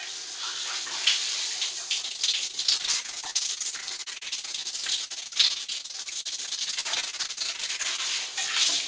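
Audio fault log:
2.02–8.00 s, repeated packet loss (robotic sound): about a hundred short holes, none longer than roughly 57 ms, each patched by stretching the previous sound. Over a third of this stretch is concealed, so it turns choppy, with nothing above 8 kHz, which fits a G.722 call path.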